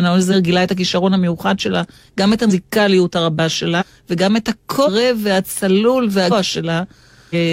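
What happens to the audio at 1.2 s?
At 1.2 s the speech carries on intact, with no dropout, click, distortion or other fault at that moment.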